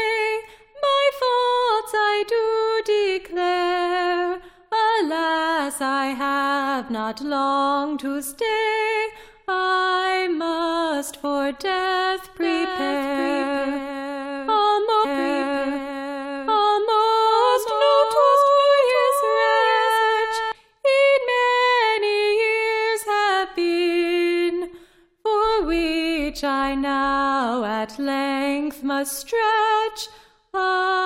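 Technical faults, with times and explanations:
12.42 to 20.52 s, doubled audio track: A second full-band copy of the sound runs roughly 0.7 s behind the original, about 5 dB quieter, so every event is followed by a dry, uncoloured repeat with no decay or room tone. The copy cuts in abruptly at 12.42 s and drops out just as sharply at 20.52 s. This most likely comes from the signal being captured a second time through a slower path and mixed back in.
15.04 to 17.03 s, stream segment repeated: About 2.0 s of programme plays a second time. The player fetched or queued the same segment twice, so playback jumps back and replays material already heard. A small blip marks the jump at 15.04 s, where the stream splices back to the earlier point. The repeat adds roughly 2 s to the running time, and it falls inside the stretch where the doubled copy is also present.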